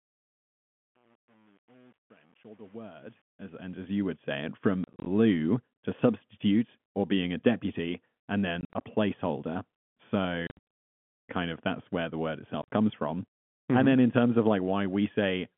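The fade-in from the start to 4.16 s shows truncation distortion: the volume ramp keeps too few bits, which sounds like about 9, with no dither, so the quiet stretch up to 3.52 s turns gritty before clearing by "say it from".

Then comes packet loss filled with silence: hard-edged holes at 4.84–5.06 s (just after "say it from"), 8.61–8.81 s, 10.47–10.61 s, and 12.62–12.69 s between "that's where the word" and "comes from". The gaps run up to 80 ms, which fits 10 ms packets.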